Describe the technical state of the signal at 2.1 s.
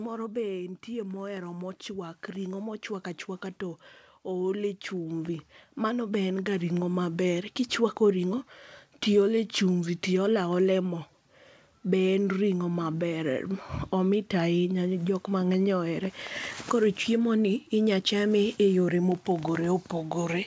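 At 2.1 s the level is partway through an automatic gain rise. It runs from 0.85 s to 2.9 s and lifts the signal by about 5 dB in total. The gain control judged the input too quiet and raised its gain step by step. Speech and background noise swell together, so the room grows louder along with the voice. The call path's G.722 codec leaves nothing above 8 kHz.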